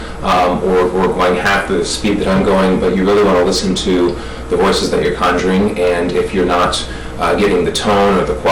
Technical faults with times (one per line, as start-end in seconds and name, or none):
0.00-8.52 hard clipping